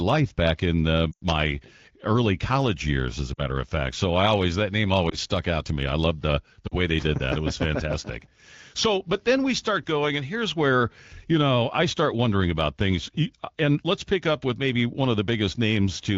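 Lost AMR speech frames cause dropouts at 1.12–1.23 s, the longest at about 0.1 s, then 3.34–3.40 s, 5.09–5.17 s and 6.68–6.75 s. The decoder repeats the last good pitch with falling gain, so in the multi-frame runs the speech drops to near silence within two frames before returning weak or rough, while the single lost frame at 5.09 s gives only a brief dip or warble. On a spectrogram each gap shows flattened, repeated harmonics thinning to a fading band, and the waveform shows a decaying envelope.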